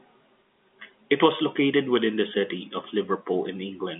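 Nothing technically wrong turns up in this bit of speech, which comes down an ordinary G.711 telephone line with its usual band of roughly 200 Hz to 3.5 kHz, just as you'd expect from a phone call.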